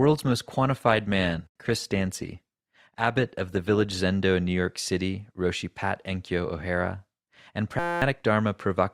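From 0.0 to 4.0 s the speech comes from an adaptive stream starting at a low bitrate. The player begins on a lean version to get going fast. Treble is thin or synthetic, and codec artefacts are stronger. The sound fits Opus at around 24 kbit/s. At 4.0 s the player has measured the connection and switches up. Quality jumps at once to something like 64 kbit/s, with no gap in the audio.

From 7.79 to 8.02 s there is a system hang loop. The computer or driver froze while the sound hardware kept replaying the same ring buffer. A 5.8 ms slice repeats dozens of times, which fits a 256-sample buffer. The slice is so short that it merges into a steady buzz at 172 Hz. About a fifth of a second of real audio is lost under it.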